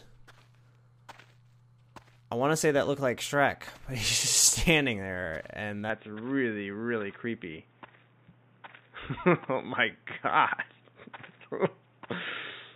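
From 5.9 s to the end, the sound abruptly turns dull and boxy, with nothing above 3.7 kHz, a faint new noise floor roughly 40 dB down, and no gap or level jump. This is likely an input switched to a poorer device. A spectrogram shows a sharp ceiling appearing there.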